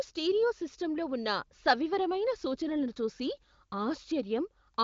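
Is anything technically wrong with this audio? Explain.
No, nothing is wrong: the speech has come through the AMR wideband (HD Voice) codec at 23.05 kbit/s, a high rate, where any coding damage is faint at most, and the empty band above about 7.4 kHz is simply that codec's normal ceiling.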